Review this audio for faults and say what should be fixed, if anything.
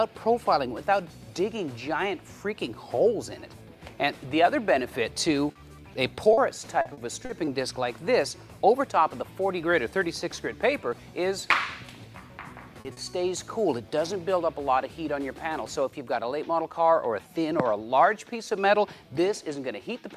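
There are a couple of short stalls from late packets, at 5.51 s and 6.15 s. A packet showed up late, the jitter buffer ran dry, and the receiver held the last sound for about 40 ms and then 20 ms before picking up where it left off. Nothing's lost, but the sound drags briefly. A slightly deeper or adaptive jitter buffer would absorb delay swings of that size.

You'll also hear short concealed packet loss at 6.33 s, 12.81 s and 12.93 s. Each time about 40 ms never arrived, and the decoder papered over the gap by extending the previous sound, so you get a quick smear or wobble. The last two sit close together. Forward error correction or redundant packets would recover most of these.

From 6.81 to 7.50 s there's repeated packet loss with a robotic sound: four gaps, the longest 40 ms, with roughly a fifth of that stretch patched. The fills follow one another closely, so it turns choppy. Fixing the lossy network path, or adding stronger FEC, would stop those bursts.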